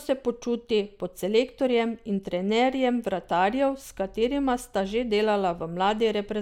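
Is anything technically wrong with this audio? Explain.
No, nothing technically wrong turns up anywhere in this recording.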